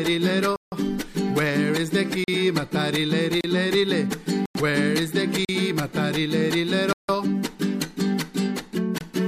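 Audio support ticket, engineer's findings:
Block of digital silence, seven dropouts: 0.56–0.72 s (160 ms), 2.24–2.28 s (40 ms), 3.41–3.44 s (32 ms), 4.46–4.55 s (96 ms), 5.45–5.49 s (40 ms), 6.93–7.09 s (160 ms), 8.98–9.01 s (25 ms). Hard cut to silence and back, no fade. The 160 ms ones read as audible holes. Probable component: output stage, buffer not filled in time.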